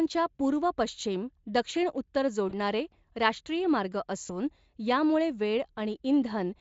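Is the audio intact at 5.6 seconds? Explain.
Yes, the speech at 5.6 seconds is intact, with no dropout, click or other fault at that moment.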